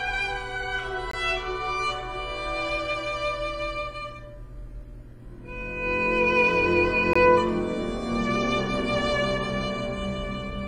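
At 1.11 to 1.13 s and again at 7.13 to 7.16 s, the sound drops into a hard-edged hole of silence about 20 ms long, abrupt at both ends, as if briefly switched off. These are gaps between stream segments. The timestamps of consecutive segments, which here are 6 seconds apart, leave a sliver of uncovered time, and the player pads it with silence. Nothing is missing; the audio simply resumes late.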